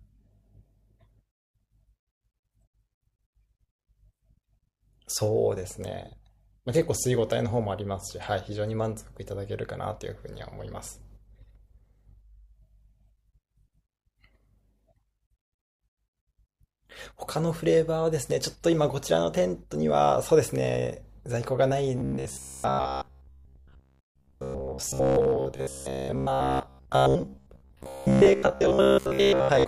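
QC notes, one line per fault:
21.98 to 29.67 s, robotic sound from repeated short buffers: the speech becomes a rigid, metallic buzz near 66.7 Hz that still loosely tracks the syllables, with most of the real audio missing. The cause is likely late-arriving audio being papered over by looping a chunk of about 15 ms, which fits a 15 ms buffer. On a spectrogram this shows as a fixed harmonic comb at multiples of 66.7 Hz; the waveform shows identical 15 ms cycles repeating.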